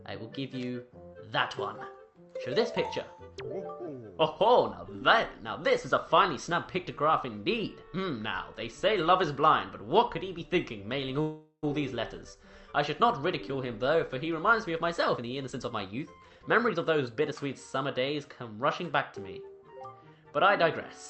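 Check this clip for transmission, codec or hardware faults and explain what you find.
Two transmission faults are audible, both from the receiving end of a call path whose top end stops around 8 kHz.

From 11.21 to 11.65 s there is a call audio freeze, likely from delayed packets draining the jitter buffer. The last sound is stretched into a fading buzz or hiss ending in a brief silence, then resumes exactly where it stopped. Unlike a dropout, nothing is lost; the sound is merely postponed.

From 14.79 to 17.33 s, a jitter buffer speed-up trims pitch-period slices to shed roughly 400 ms of backlog. The audio plays at about 117% speed, sounding hurried. Unlike resampling, the pitch stays unchanged.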